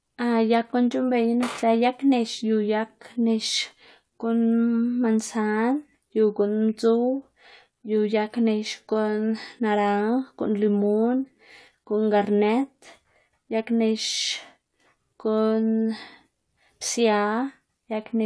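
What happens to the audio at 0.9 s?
Nothing goes wrong at 0.9 s: the speech there plays through intact, with no dropout, click, distortion or other fault.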